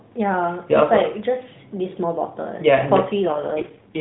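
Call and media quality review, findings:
AMR rate drop, 3.26 to 4.00 s. Speech turns rough and buzzy. Band unchanged, no gap. The sound fits a fall from 12.2 to 4.75 kbps.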